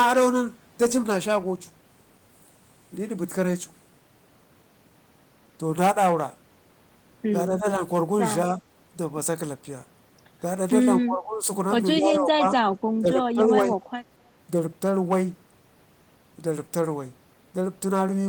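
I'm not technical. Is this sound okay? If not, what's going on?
No. There are three problems.

Hard clipping runs through the whole clip. The recording was driven louder than the equipment could handle, so the tops of the loudest moments were sliced off flat. That flattening adds a harsh crackle or fuzz. It mostly affects the peaks, a small share of the sound overall, but it stays present from start to finish rather than coming and going.

Speech is suppressed in double talk at 7.56 to 7.81, 8.50 to 8.61, 11.02 to 11.47, 11.97 to 12.58 and 12.89 to 13.78 seconds. The talker's level dips in these stretches. The first two are slight dips, and the last three are much deeper. This is likely the call's echo-cancelling system mistaking the talker for echo while both sides spoke at once, and turning everything down.

An echo leak follows almost immediately, from 13.82 to 13.86 seconds. It is a very faint, brief copy of the speech arriving 229 milliseconds late, roughly a quarter second. 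The likely cause is a loudspeaker on the far end whose microphone picked the sound back up, and the echo canceller didn't fully remove it. Because it is short and quiet, it registers as a faint ghostly trace rather than a clear repeat.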